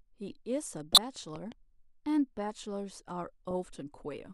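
Around 0.92 to 0.98 s there's a corrupt frame decoded: roughly two damaged frames got played anyway, throwing energy into the wrong frequencies, so you hear a fairly loud glitch. Then from 1.36 to 1.54 s comes a loud pop, actually two in quick succession, jumping well above the speech, likely from a plug, switch or static spike. At 3.51 to 3.53 s another corrupt frame decoded slips through, just one frame this time, heard as a much fainter glitch.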